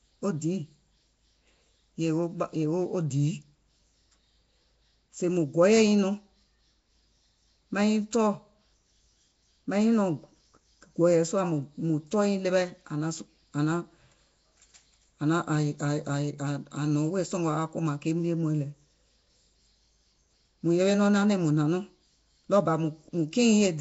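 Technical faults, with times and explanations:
Throughout, Nellymoser compression: the speech carries a plainly audible rough, hissy halo and a smeared, underwater quality, with nothing above 7.7 kHz. The likely cause is the Flash-era Nellymoser Asao codec, which fits a rate of about 32 kbps. It codes the signal in short blocks with a fixed, small bit budget, leaves weak bands without bits and fills them with noise, which produces the hiss and the blurred detail.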